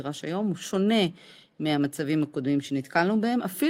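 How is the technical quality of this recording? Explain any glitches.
No glitches or technical faults can be heard anywhere here.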